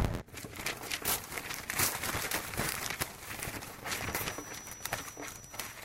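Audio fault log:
throughout: filter restarted on every block, each one starting cold with a tick, so there's a level-following 86.1 Hz buzz, fitting a 512-sample buffer.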